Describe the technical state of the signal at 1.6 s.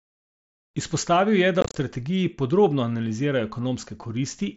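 Unconcealed Bluetooth headset packet loss hits the headset link from 1.61 to 1.76 s, just before "strategiji podrobno analizirajo": lost voice packets were replaced by silence or an idle pattern. About 105 ms vanishes across 150 ms, in holes up to 30 ms, so the speech sounds chopped, with abrupt gaps.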